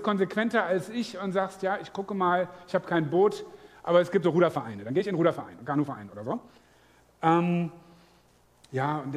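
From 4.21 s to 6.67 s there is a time-stretched section: the sound suddenly runs about 1.58 times faster with its pitch unchanged, so it comes across as rushed. This likely comes from software squeezing the passage to fit a length by dropping short pieces.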